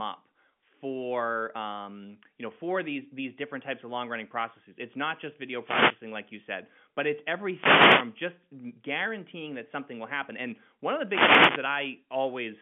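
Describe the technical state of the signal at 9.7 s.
At 9.7 s the signal is intact, with no fault present, only the narrow telephone band of G.711 coding, which leaves nothing above about 3.7 kHz.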